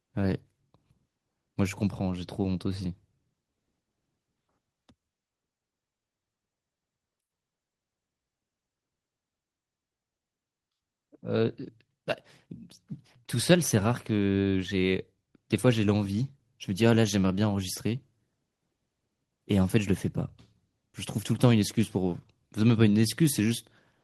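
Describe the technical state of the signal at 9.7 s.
At 9.7 s the speech signal is intact, with no dropout, clipping, glitch or other technical fault audible at that moment.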